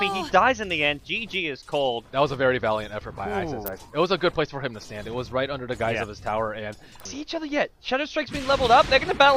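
At 3.66 s a sharp snap cuts across the sound. It is an electrical switching spike, and a strong one, peaking around -10 dBFS. A second, fainter snap follows at 7.00 s, closer to -20 dBFS and only a couple of milliseconds long. Both sit on top of the audio rather than replacing it. The likely cause is a nearby switch, motor or static discharge arcing briefly, with the audio line picking up each burst.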